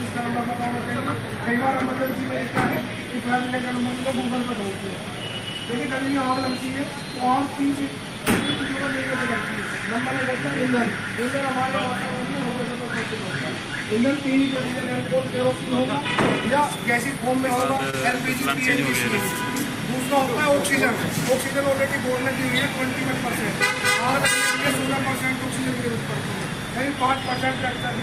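At 17.90 to 17.95 s there's a short concealed packet loss: about 20 ms arrived too late, so the receiver extended the preceding sound, giving a brief smear.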